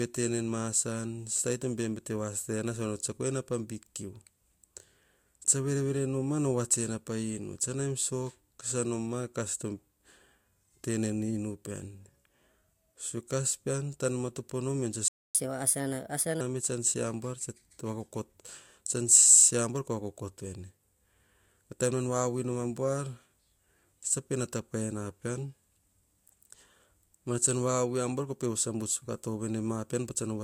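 At 15.08 s the player most likely ran short of buffered data or had its output thread held up, a playback stall. The speech cuts out in mid-flow and the output sits silent for about 0.26 s, resuming at 15.35 s.

From 15.35 s to 16.41 s the player drains its backlog by resampling, catch-up at higher speed. The speech runs 1.25 times too fast and its pitch rises by roughly four semitones, starting with the words "me tsan se abuar".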